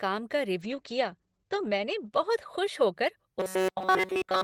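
From 0.63 s to about 3.01 s there's a call bitrate drop. The bandwidth estimate sagged and the encoder got squeezed from 32 kbps down to 11 kbps, sitting at the bottom for roughly 1.1 s. At that rate it coarsens everything and pulls the audio band in from about 20 kHz to 8 kHz, so the speech goes dull and a bit rough and watery before it opens back up.

Then from 3.40 s right through to the end at 4.44 s the speech goes robotic. It's a stiff metallic buzz at 188 Hz that still vaguely tracks the talking, and basically the whole stretch sounds like that. The likely cause is fresh audio arriving too rarely, with the software looping the last short buffer over and over. A 188 Hz buzz fits repeats of roughly 5.3 ms.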